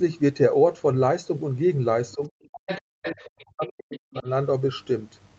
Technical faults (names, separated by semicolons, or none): speech suppressed in double talk; other side's voice leaking through